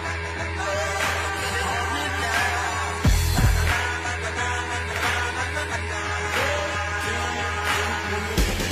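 At 1.42 s, the sound garbles briefly until 1.65 s. This is frames out of order. Two neighbouring blocks of about 93 ms each were decoded in swapped order, so the stretch plays with its halves exchanged. You hear a short flutter. No time is lost. The same fault returns at 3.37 s and at 4.91 s. Each time, the swapped blocks are shorter, about 46 ms each, so the flutter is briefer.

From 6.25 s to 7.26 s there is a train of clicks. About seven similar pops arrive at an even pace of six per second. They stand out a few decibels above the underlying sound, so they read as a steady ticking laid on top. The likely cause is interference from nearby equipment or a faulty connection or power supply.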